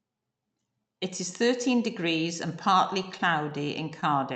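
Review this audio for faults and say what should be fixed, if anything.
Scattered short gaps, 3.03 to 4.04 s, after "thirteen degrees and partly": about seven lost or late packets, each patched by extending the preceding sound, leaving brief ticks and smears. Preventing this means improving network stability or enlarging the jitter buffer so late packets arrive in time.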